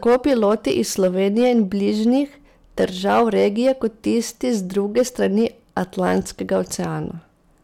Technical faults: hard clipping

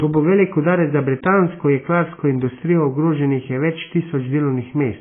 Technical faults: AAC compression

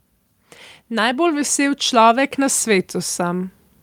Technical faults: automatic gain rising

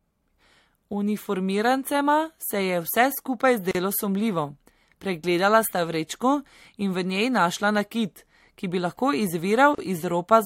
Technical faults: gap at a join of encoded pieces

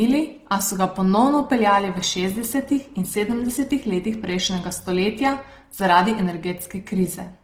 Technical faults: Opus compression

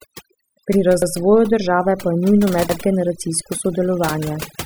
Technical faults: overdone noise removal; repeated buffer

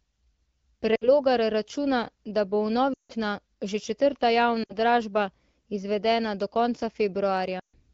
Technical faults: lost AMR speech frames

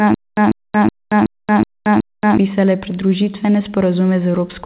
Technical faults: stutter with silent gaps

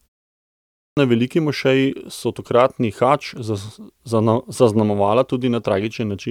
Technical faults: clipped start after a pause

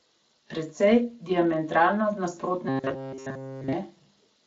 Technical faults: robotic sound from repeated short buffers

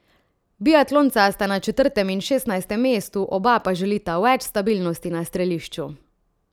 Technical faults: none

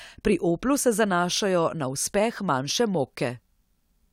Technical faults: none

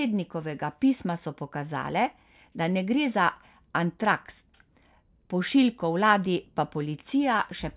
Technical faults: none

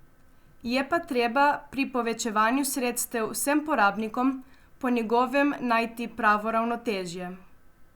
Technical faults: none

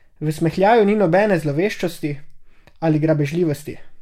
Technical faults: none

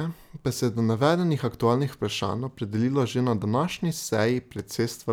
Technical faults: none

